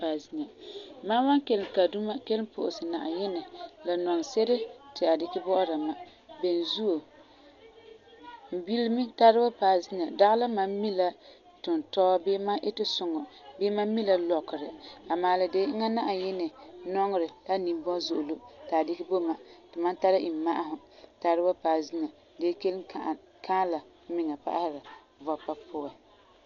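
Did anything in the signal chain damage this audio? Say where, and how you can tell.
Yes, at the codec stage: throughout the speech, nothing above 6.9 kHz survives, and tones carry a rough, fluttering noise, which points to a very low bitrate near 48 kbps. This is likely Dolby Digital compression, its starved frequency lines refilled with dither noise. A spectrogram shows a flat ceiling and grainy smearing around harmonics.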